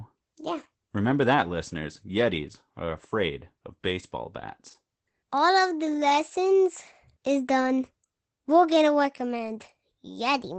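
From start to finish the speech carries Opus voice compression, and the damage is plainly audible. The coder is running in its linear-prediction SILK mode at wideband, with nothing above about 8.6 kHz, so the top of the band is simply gone and sibilants lose their air. The coarse excitation coding, consistent with a bitrate around 12 kbps, makes the voice muffled, hoarse and faintly robotic. On a spectrogram the energy stops at a flat ceiling near 8.6 kHz, with smeared, blocky texture at the 20 ms frame rate.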